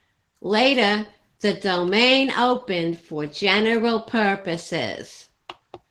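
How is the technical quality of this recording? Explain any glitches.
The speech carries plainly audible Opus voice compression from start to finish, and that's the only problem. The codec seems to be running in hybrid mode: a linear-prediction coder handles everything below 8 kHz while a transform layer fills in the top of a full-bandwidth signal. The damage sounds like a tight budget, probably around 16 kbps. The excitation is coded coarsely, which gives the voice a hoarse, faintly robotic grain.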